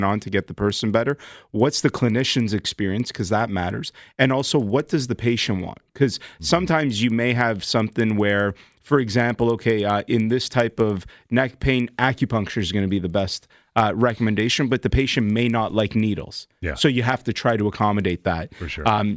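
Throughout, the resampler restarted on every block, treating each 100 ms chunk in isolation; the mismatched edges tick steadily at 10 Hz under the speech.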